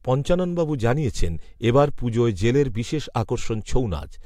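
No technical faults turn up anywhere in this speech recording, so there's nothing to walk through in time order.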